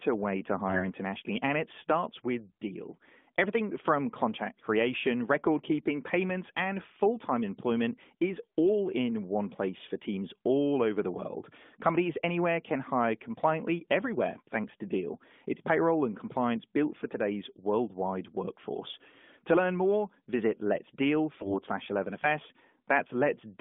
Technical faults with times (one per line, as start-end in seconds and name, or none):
0.68-0.86 AMR bit errors
21.40-21.55 AMR bit errors